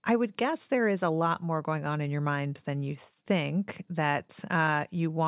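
Speech, with nothing technically wrong with it.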